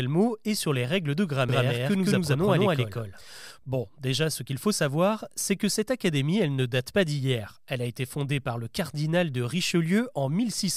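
From 1.49 to 3.51 s, right after "sur les règles de", a doubled audio track appears: a second full-band copy of the speech, about equally loud, trails by roughly a fifth of a second, likely from an out-of-step second capture. Unlike an echo, it has no decay or room colour and starts and stops abruptly.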